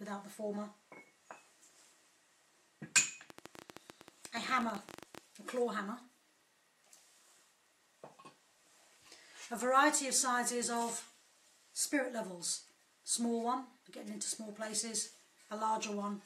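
From 3.30 to 5.19 s, a train of clicks: around thirty irregularly spaced pops, about 15 per second and up to about 10 dB above the sound, likely from electrical interference.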